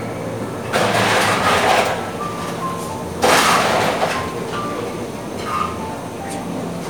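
No technical faults are audible anywhere in the recording, so there is nothing to flag.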